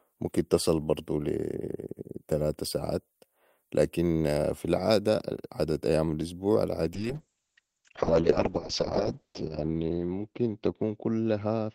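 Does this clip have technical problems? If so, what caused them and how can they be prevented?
Yes. A call bitrate drop starts at 6.94 s, just after "العاده عدت أيام الاسبوع", and lasts to the end of the clip. The speech turns rough and muffled as the audio bandwidth narrows from 20 kHz to 8 kHz, with the coarsest stretch lasting about 2.2 s. This fits the call's bandwidth estimate collapsing and the encoder falling from around 48 kbps to about 6 kbps. Prevention: give the call a stable, uncongested network path so the bandwidth estimate stays high.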